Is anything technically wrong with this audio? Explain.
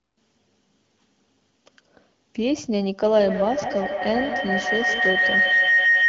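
Yes. From 3.02 s to the end of the clip a feedback howl takes over the speech. A microphone and loudspeaker are feeding each other, and each pass round the loop adds level. The repeats climb until a tone around 2 kHz peaks about 4 dB above the speech, coming round roughly every 150 ms as it circulates. On a spectrogram this shows as a bright horizontal line near 2 kHz, and the waveform envelope swells instead of decaying. The HD Voice codec limits everything to below about 6.9 kHz.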